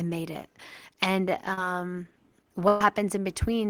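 Speech with two network dropouts. At 1.53 to 1.58 s, short concealed packet loss leaves a brief smear. About 40 ms never arrived, so the receiver extended the preceding sound. At 2.68 to 2.81 s, a burst of packet loss hides about 120 ms. The last sound is stretched and faded across the gap, and the speech resumes further on.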